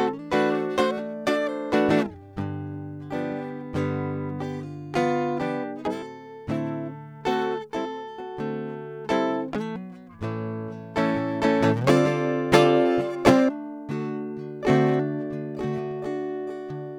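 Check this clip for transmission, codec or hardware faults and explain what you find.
No transmission, codec or hardware faults are evident in this music recording, and the signal arrives intact with no disturbance to report.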